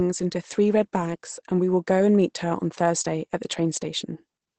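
Throughout the clip, Opus voice compression has run its speech coder at a low rate, which fits about 12 kbps in wideband mode, coding the excitation coarsely and discarding everything above 8.7 kHz. The speech sounds muffled, slightly hoarse and faintly robotic, with the damage plainly audible.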